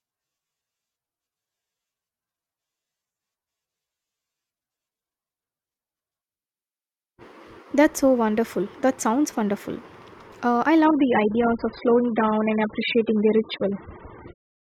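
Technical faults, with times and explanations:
10.85–14.68 s, adaptive stream at a lower bitrate: quality drops suddenly without a gap, as the stream switches to a much lower-bitrate version, removing everything above 5 kHz and adding codec artefacts.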